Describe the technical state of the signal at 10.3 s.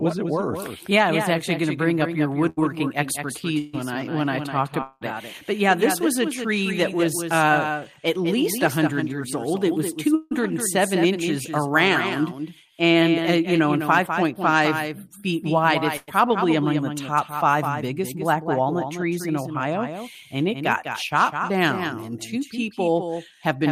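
At 10.3 s you're inside a long network dropout running from about 10.15 to 10.33 s. Packets likely never arrived, so the receiver stretches the last sound into a fading buzz or hiss for roughly 0.16 s. Under that, the whole clip carries a doubled audio track: a second full-band copy about 10 dB down trails by around a fifth of a second, likely from a slower capture path.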